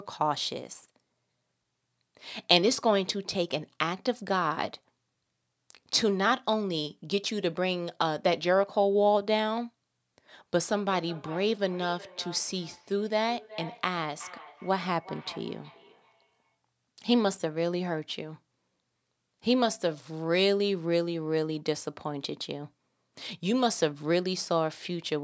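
Feedback echo between two devices runs from 10.9 s to 16.58 s. Two devices in the same room share the call, so one plays the other's microphone signal and that microphone picks the sound up again. Each device's echo canceller removes only its own playback, so the loop goes uncorrected. The speech returns as a delayed copy roughly every 0.4 s, peaking at about 18 dB below the direct speech.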